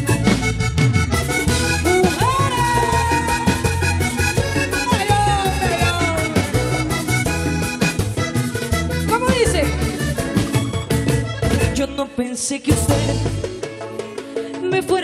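No technical faults can be heard anywhere here.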